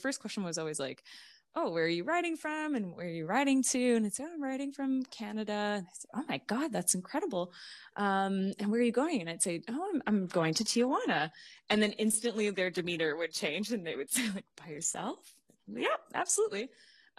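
At 10.04 s, after "I'd say oh I'm", the adaptive stream drops to a lower bitrate. Treble drops and the spectrogram suddenly empties above 12.4 kHz, fitting low-bitrate HE-AAC.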